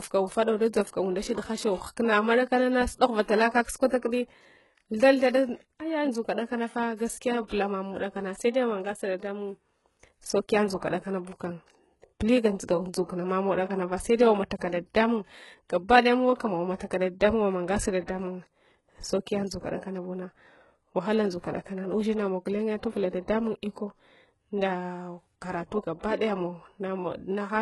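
A speech recording with heavy codec damage throughout: the treble sounds gritty and lispy on s sounds, likely from HE-AAC compression at a very low bitrate around 12 kbps, and a spectrogram shows nothing above 11.5 kHz, with smeared, copied-looking upper bands. Pre-echo appears from 7.47 to 7.51 s, where a short hiss spreads about 39 ms ahead of an attack, visible as a low-level smear before the waveform's sharp onset.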